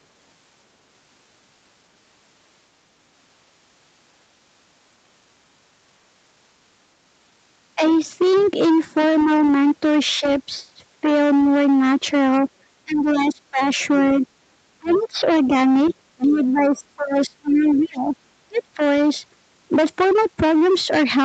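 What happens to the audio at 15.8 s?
Hard clipping runs through the whole clip, so it is present at 15.8 s as well. The signal is driven about 11 dB past what the chain can pass, and roughly one sample in seven hits the ceiling and is cut flat. Those squared-off peaks throw harmonics high up the spectrum, so every loud stretch of speech around this moment carries a harsh, gritty fuzz rather than occasional crackle.

Speech suppressed in double talk spans 12.84 to 18.79 s, and 15.8 s sits in the middle of it. The talker's level sags and breaks up in pieces, with the deepest dips reaching around 25 dB and about three seconds of the span affected in total. This is likely an echo canceller that heard both parties at once, could not tell its own talker from the loudspeaker return, and turned everything down together.

Other side's voice leaking through spans 14.87 to 16.46 s, also covering 15.8 s. 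A second voice sits faintly underneath, some 20 dB below the talker. It is likely the far end playing from the talker's loudspeaker and only partly removed from the microphone signal, so that residual echo slips through while the talker's own speech is being ducked.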